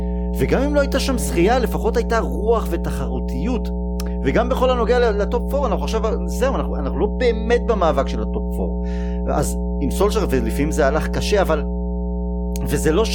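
From start to finish the speech sits on mains hum, a steady low tone at 60 Hz with some low harmonics, running roughly as loud as the speech itself. Power-line current has leaked into the signal, through a ground loop or a nearby transformer. Unlike broadband rumble from handling or wind, the tone holds one fixed pitch and level and never shifts with the speech, so it carries on unchanged through every pause.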